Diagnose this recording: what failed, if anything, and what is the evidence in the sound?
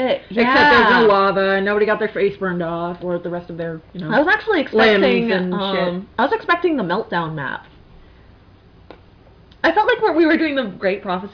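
Nothing here points to a failure at any stage of the chain, so there's no fault to diagnose in this recording.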